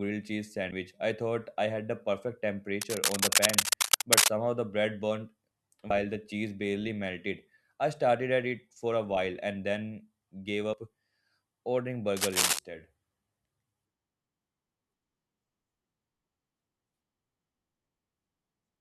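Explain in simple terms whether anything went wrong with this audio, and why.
Three brief chirps or blips interrupt the speech, at 0.69 to 0.72 seconds, at 5.90 seconds and at 10.74 seconds. That is damaged data in a compressed stream: a few pieces of the compressed file were wrong or missing, so the player could not decode that bit properly, lost its place, and jumped ahead to the next piece it could read, leaving a short squawk behind.

Twice there is a rough scratching or rustling laid over the speech and louder than it, first from 2.81 to 4.28 seconds and again from 12.16 to 12.59 seconds. This is cable scratch noise, likely from a worn cable, plug or control being moved. A loose or dirty contact keeps changing how well it connects, and those rapid changes come through as uneven bursts of crackly noise while the contact is being disturbed.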